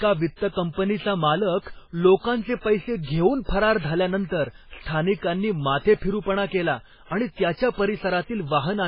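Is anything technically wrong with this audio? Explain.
Yes. Throughout the speech, nothing reaches above 5.2 kHz, and the sound is heavily watery and swirling, with metallic s sounds. The cause is likely MP3 compression at a bitrate near 16 kbps: the encoder cuts the treble and drops weak spectral lines that flicker between frames.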